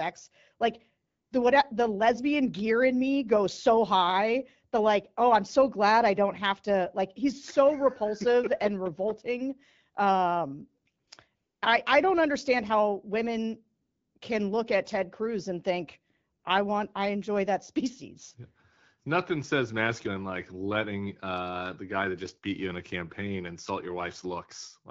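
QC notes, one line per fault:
1.07–1.31, 11.05, 11.35–11.61 (before "I I don't understand"), 13.81–14.15, 14.17–14.21, 16.39–16.43 s: AMR comfort noise. Speech frames stop. Smooth synthetic noise replaces the real background, then switches back out.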